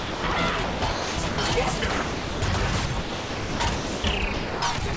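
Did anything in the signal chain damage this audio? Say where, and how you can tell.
Yes. In the call-processing stage, the sound drops out in stretches at 0.00–0.36, 0.64–1.38, 1.78–2.42, 2.86–4.04 and 4.34–4.96 s. Inside these stretches, about 0.26, 0.54, 0.54, 0.92 and 0.33 s of real signal give way to a steady hiss. This is likely sound chopped by the voice detector, with comfort noise filling the gaps. Packet-loss concealment would leave stuttered or warbled fragments, but here the background becomes smooth synthetic noise and then snaps back. The call path itself, with nothing above 8 kHz, fits a 64 kbps G.722 stream.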